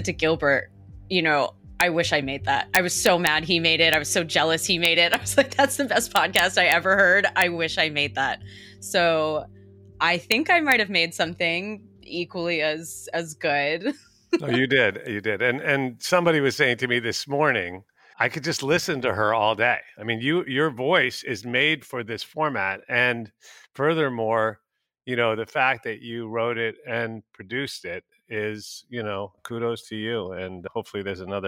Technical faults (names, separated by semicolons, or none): integer overflow